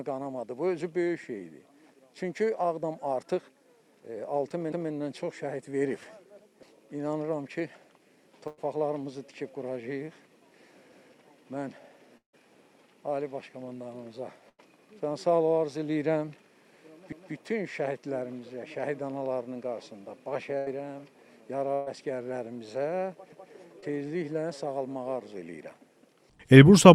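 The first stutter lands at 4.72 s. It's overlapping chunks: the audio is being handled in 6-second blocks, and each new block starts 200 ms before the previous one has finished, so that 200 ms slice plays twice and you hear a little hiccup at the seam. Since the blocks are a fixed length, it comes back like clockwork, at 10.92, 17.12 and 23.32 s, each time the same 200 ms doubled up.

In between, at 8.47 s, there's a burst of packet loss. About 100 ms of audio never got through, and the receiver papered over the hole by stretching the last bit of sound and letting it fade, so you get a short held, dying tail. Then the audio picks up a little further along, with that 100 ms simply gone.

At 12.17 s there's a longer gap, about 160 ms in all. The last sound carries on and fades out, then there's roughly 120 ms of dead silence before the audio comes back, further on. That pattern is likely a long network dropout, where nothing arrived for long enough that the fill ran out and left only silence.

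More bursts of packet loss follow with the same held-and-fading fill. At 14.49 s about 100 ms is lost, at 20.58 s about 80 ms, and at 21.74 s about 120 ms. That last one is covered right to the end with no silence before the audio resumes.

Finally, at 23.80 s, just after that last chunk seam, there's a short concealed packet loss. Only about 20 ms went missing, and the decoder bridged it by extending the preceding sound and blending straight back in. It comes across as a tiny smear or wobble rather than a gap.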